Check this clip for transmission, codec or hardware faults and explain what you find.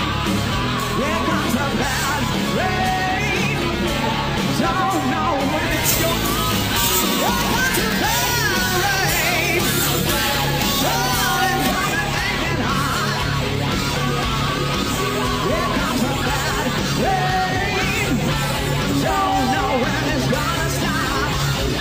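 One transmission fault is present. From 5.71 to 11.71 s there is pre-emphasis left on: the treble boost of a 50 µs FM curve was applied but the matching de-emphasis never followed, leaving 10 kHz about 11 dB above 1 kHz. The sound turns thin, bright and harshly sibilant.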